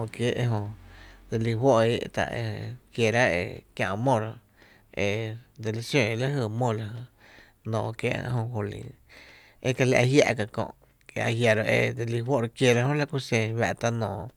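No technical faults can be heard anywhere in this speech recording. The sound runs continuously, with nothing that points to a problem in how it was captured or passed along.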